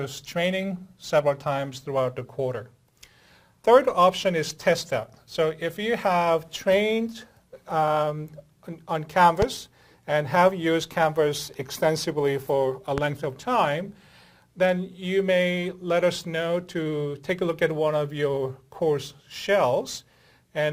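Two loud pops, at 9.42–9.45 s and 12.98–13.00 s, each jump well above the sound, which continues underneath. A voltage spike from a switch or static is the likely cause.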